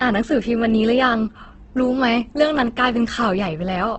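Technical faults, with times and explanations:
Throughout, Opus compression: the speech sounds rough and grainy rather than swirly, and everything above about 8.1 kHz is gone. That fits the likely cause, an Opus encoder at a low rate around 12 kbps in its music mode. Starved of bits, it keeps each band's energy but refills detail with folded or noisy content. A spectrogram shows a hard ceiling near 8.1 kHz and smeared, speckled texture where harmonics should be clean.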